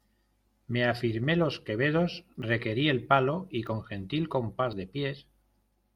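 Speech with three points where the audio jumps ahead, at 2.42 s, 3.67 s and 4.73 s, the last skip longer at around 30 ms against roughly 10 ms for the others. These are likely dropped buffers (overrun): unread audio was overwritten, and the surrounding sound spliced together.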